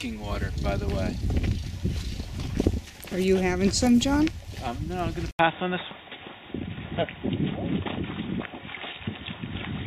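At 4.30 s a run of compressed frames gets skipped, so the audio lurches ahead about 150 ms, the frames being 24 ms long. From 5.31 s, after an 80 ms gap, the sound turns dull at the same loudness, with nothing above 3.8 kHz and faint new noise about 50 dB down. That's likely the input switching to a poorer device. More skipped frames follow at 5.91 s and 7.97 s, dropping roughly 200 ms and 300 ms.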